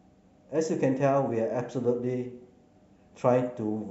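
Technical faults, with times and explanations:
No technical faults detected in the speech.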